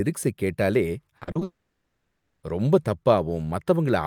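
Speech that turns choppy and robotic from 1.17 to 1.43 s, with four short holes, the longest about 40 ms, patched over by repeated sound for roughly half that stretch. This is repeated packet loss. From 1.43 to 2.45 s the sound stretches into a fading buzz, then about 0.47 s of silence before it resumes with roughly a second missing. That pattern is likely a long network dropout.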